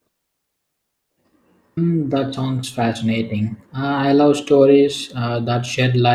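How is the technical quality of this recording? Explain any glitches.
No technical faults can be heard anywhere in the recording; the signal stays continuous and stable throughout.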